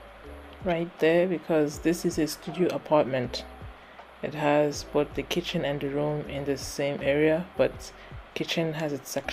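No technical faults can be heard anywhere in the audio; the signal holds steady throughout.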